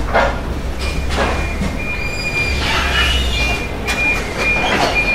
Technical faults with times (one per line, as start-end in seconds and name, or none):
none